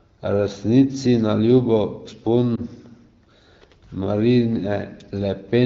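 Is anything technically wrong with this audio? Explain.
Yes. From 2.56 to 2.60 s there is a lost AMR speech frame: the decoder rejected one corrupted 20 ms frame and rebuilt it from the previous frame's pitch and vocal-tract settings at reduced gain. The result is a brief dip or warble, not a click or hard silence. Throughout, the audio carries the light band-limited character of the AMR wideband (HD Voice) codec, which fits a mid-to-high bitrate.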